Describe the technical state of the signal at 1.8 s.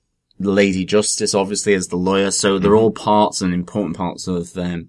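At 1.8 s the speech signal is intact, with no audible technical fault at that moment.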